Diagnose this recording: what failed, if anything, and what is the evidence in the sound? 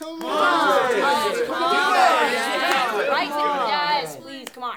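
Dropped samples, likely at the driver or buffer stage, occur at 0.32, 1.32 and 3.40 s; each tiny waveform jump gives one sharp click.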